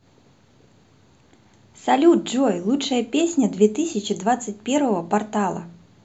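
No dropouts, clicks, distortion or other faults occur anywhere in the recording.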